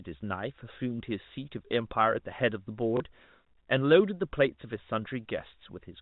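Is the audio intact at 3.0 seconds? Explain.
No. From 2.97 to 3.0 s there is packet loss with the last packet repeated, a 30 ms gap that fits one lost packet. The receiver replayed the last packet, so the waveform shows a repeated segment. It sounds like a small blip.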